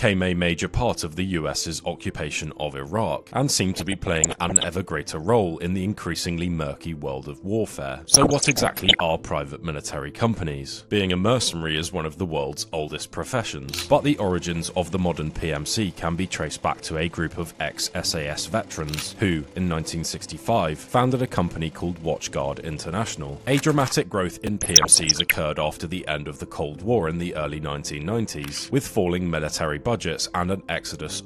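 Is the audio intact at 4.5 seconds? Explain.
No. At 4.5 seconds the audio is caught in a burst of DAB burbling running from about 3.74 to 4.64 s. Bit errors at a rate of roughly half a percent have slipped past error correction into the MPEG Layer II stream, corrupting samples and scale factors so that individual sub-bands lurch in level frame by frame. It sounds like bubbling mud, with chirps and squelches over the sound. On a spectrogram this shows as scattered rectangular blocks of energy, each confined to one band and lasting one frame, switching on and off; the waveform shows brief, irregular bulges in envelope.

Underneath, the whole clip carries MP2 compression, plainly audible and consistent with a rate of around 80 kbps. Too few bits reach the 32 sub-bands, so upper bands drop out intermittently and the remaining ones are coarsely quantised, giving a dull tone with gurgling, granular grit. 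The likely cause is a low-rate Layer II encode. A spectrogram shows a ragged, flickering ceiling where high bands blink in and out, with horizontal band boundaries visible in the upper range.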